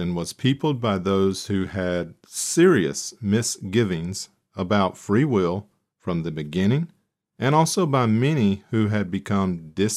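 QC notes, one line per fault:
No faults heard at any point in the audio.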